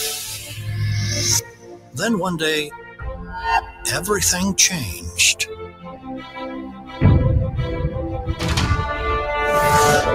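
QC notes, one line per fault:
Throughout: noise suppressor applied to music or sounds. A speech-tuned suppressor keeps treating steady tones, ambience and decaying tails as noise, so level swings by around 10 dB. Attacks mostly pass while sustains sink, giving pumping and thinning rather than clean dropouts or gating.
0.39–0.62 s, 1.41–1.98 s, 2.69–3.31 s, 3.62–3.84 s, 4.95–5.12 s, 5.41–6.37 s, 6.63–7.02 s: sound cut by the noise suppressor. Held or fading sound is pulled down by about 6 to 15 dB, deepest near 1.41–1.98 s, and tails are cut short. Onsets survive, unlike a true dropout.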